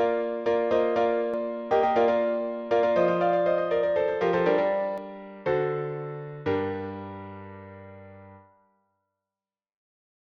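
From 1.34 s to 4.98 s the audio is doubled: a second full-band copy trails the original by about a tenth of a second, roughly 5 dB quieter, giving a hard, slap-like echo with no decay or room colour. It likely comes from the signal being captured twice through a slower path. On a waveform each transient shows a smaller twin just behind it; a spectrogram shows every onset repeated, and the copy starts and stops abruptly.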